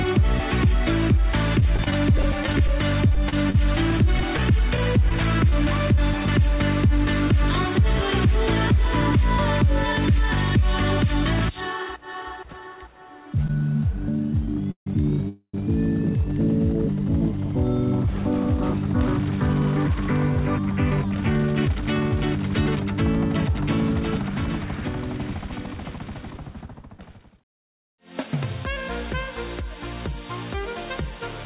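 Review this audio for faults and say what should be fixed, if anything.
Scattered short gaps run from 1.6 to 5.98 s: about twenty brief holes, none much over 30 ms, roughly 300 ms concealed in total, or about 7% of that stretch. Each lost or late packet was patched by extending the preceding sound, leaving small ticks and smears. Prevention: add forward error correction or redundancy and reduce packet loss on the network path.

A short stall from a late packet occurs at 13.47 to 13.50 s. The packet missed its playout time, so the jitter buffer ran dry and the last sound was held for 25 ms before continuing from the same point, with nothing lost. Prevention: keep a slightly deeper jitter buffer margin for late arrivals.

A jitter buffer slow-down runs from 13.93 to 16.18 s at 98% speed, adding 55 ms. The receiver repeated single pitch periods and pause fragments to rebuild its reserve, so the sound is drawn out at unchanged pitch. 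Prevention: stabilise packet arrival timing so the buffer does not drain.

Two call audio freezes follow, at 14.71 to 14.87 s (148 ms, including about 100 ms of silence) and 15.29 to 15.54 s (249 ms, about 80 ms silent). Each is heard as a fading continuation dropping to silence, then the sound resumes where it stopped. The likely cause is packets held up in transit emptying the buffer. Prevention: fix the upstream congestion or route delay causing the bursts.

A jitter buffer speed-up runs from 18.07 to 26.99 s at 105% speed, removing roughly 400 ms. The receiver cut short pitch-period segments repeatedly to reduce delay, giving a hurried feel at the same pitch. Prevention: avoid the delay spikes that force the buffer to overfill and then drain.

The G.711 mu-law call path carries nothing above 4 kHz. That band limit is expected for this codec.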